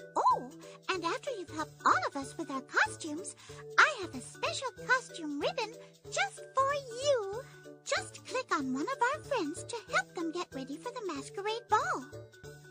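No technical faults are audible anywhere in the clip.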